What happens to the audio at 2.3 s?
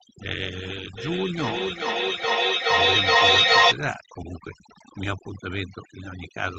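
At 2.3 s you're in the middle of a feedback echo between two devices, running from 0.97 to 3.79 s. One device replays what the other's mic sent, that mic picks it up again, and nothing cancels it. The speech comes back roughly every 0.4 s, thinner and more ringing each pass, peaking at about 11 dB over the speech itself, so the repeats stack up instead of fading.

Underneath that, overdone noise removal is at work all through the clip. The suppressor pulls individual bands down or out whenever they sit close to its noise estimate, taking quiet bits of the voice with them. The pauses go nearly silent with little twinkling specks, and everything sits under the call's 8 kHz top end.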